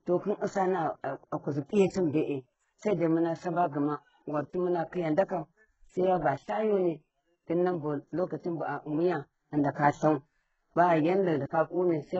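A speech clip with heavy HE-AAC compression throughout: sibilants sound gritty and lispy, and treble stops dead at 8 kHz. Unlike a plain low-pass, the top is still bright but synthetic, likely from spectral band replication at a very low bitrate, around 8 kbps.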